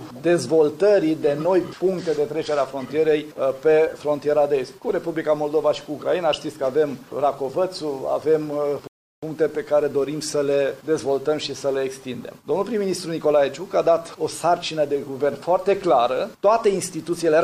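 A rebuffering stall interrupts the audio at 8.87 s: playback ran dry and halted for about 0.35 s, resuming at 9.23 s exactly where it left off, so nothing is lost but time is added. A waveform shows a flat gap; a spectrogram, a blank vertical band.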